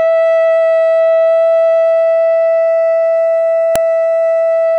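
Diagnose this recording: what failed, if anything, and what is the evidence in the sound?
A storage-stage error: separate WAV pieces of this music were joined without stripping the header of the second piece, so its few dozen bytes of file header were read as sample values and played as audio. The evidence is a single sharp, loud click at 3.76 s, a snap lasting about a millisecond that cuts across the music regardless of what it is doing. That is the signature of a file header played as audio, marking where the second piece begins.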